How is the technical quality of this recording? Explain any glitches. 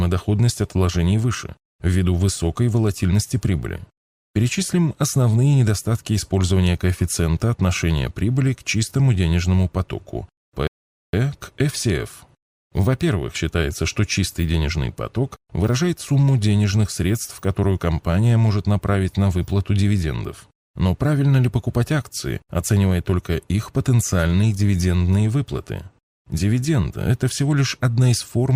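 One playback fault affects the speech. At 10.67 s, after "к чистому денежному потоку", a rebuffering stall empties the player's buffer: silence lasts until 11.13 s, then speech resumes exactly where it stopped, adding 0.46 s without losing content.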